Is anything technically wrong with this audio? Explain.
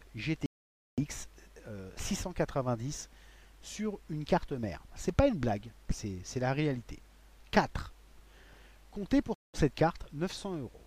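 Yes, there are two Bluetooth stalls: sound cuts to full silence from 0.46 to 1.04 s (about 0.52 s of silence) and again from 9.34 to 9.57 s (about 0.2 s). The likely cause is radio interference delaying packets until the headphone buffer emptied. Unlike a codec dropout, there is no crackle or garbling, just clean silence before the audio resumes.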